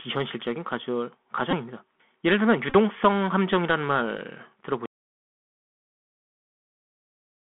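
Throughout, the speech carries the sound of a Bluetooth CVSD headset codec: the line is held to roughly 200 Hz to 3.4 kHz, with a grainy hiss beneath it and s sounds turned scratchy. Its one-bit delta steps can't keep up with loud bright sounds and smear them. That plainly audible granular damage sets it apart from a simple band-limiting filter.

At 1.51 to 1.54 s there is a Bluetooth headset packet repeated fault. About 15 ms of audio was lost and patched by decoding the previous packet's bits again, which fits four 3.75 ms packets. It gives a brief buzzy tick rather than a gap.

From 2.70 to 2.75 s a longer scatter of repeated packets covers about 34 ms of lost audio. The longest run is roughly 20 ms, and it repeats every 3.75 ms, which makes a short buzz near 267 Hz. That pitched buzz distinguishes it from a plain click or dropout.

From 4.86 s to the end, the audio drops out to silence. 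It is silent with no room tone or hiss, unlike a quiet pause. This is likely a lost input link or a mute, with the recorder still writing silence.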